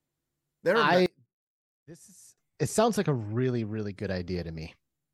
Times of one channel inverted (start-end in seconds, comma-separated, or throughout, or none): 1.06-2.38